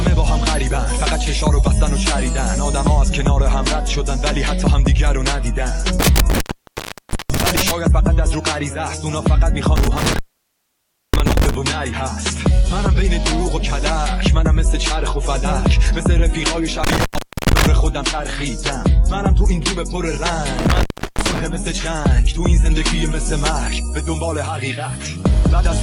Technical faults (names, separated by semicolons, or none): intermittent contact